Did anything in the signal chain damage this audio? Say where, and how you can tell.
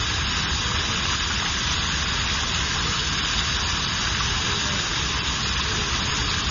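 Yes. From start to finish the sound has a watery, swirling texture, with metallic chirps on brighter content and softened, smeared attacks, and nothing reaches above 6.9 kHz. That points to heavy MP3 compression at the codec stage, likely at a starved bitrate around 24 kbps. Short of bits, the encoder cut the treble at a fixed frequency and zeroed weak frequency lines that flicker on and off from frame to frame.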